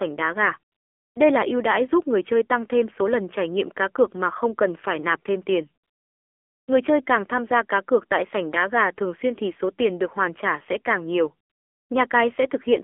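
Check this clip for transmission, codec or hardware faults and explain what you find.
Two faults are present: mobile narrowband codec coding throughout, and three comfort-noise gaps.

Throughout, the speech is thin, buzzy and synthetic, confined to roughly 300 Hz to 3.4 kHz with nothing above. That points to the AMR narrowband mobile codec at a low rate, which fits about 7.4 kbps. Each 20 ms frame is rebuilt from a vocal-tract model fed by a few pulses, so fine detail is lost.

At 0.72 to 1.16 s after "đá gà", 5.84 to 6.68 s after "phải nạp thêm tiền", and 11.48 to 11.90 s after "trả sẽ càng nhiều", the background gives way to a smooth, even hiss that switches in and out. This is AMR comfort noise. The phone stopped sending speech frames, for about 440, 840 and 420 ms, and the receiver filled each pause with synthetic noise built from a coarse level and spectrum description.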